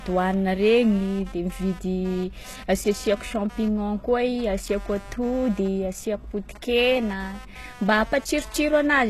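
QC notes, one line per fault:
Throughout, computer activity noise: a buzzy, chirping pulse at around 200 Hz sits roughly 25 dB under the speech and wanders with machine load rather than with what's being said. Processor or graphics load is pulling on the shared ground.
Throughout, HE-AAC compression: the top end is plainly damaged, with s sounds gritty and lispy and nothing at all above 12.3 kHz. This is likely HE-AAC at a very low bitrate, around 16 kbps, rebuilding the treble from copied lower bands.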